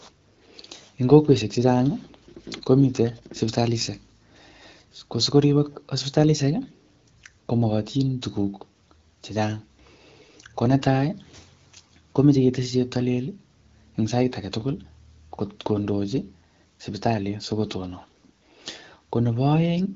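Nothing stood out on listening to this speech, which comes through the AMR wideband (HD Voice) codec at 12.65 kbit/s.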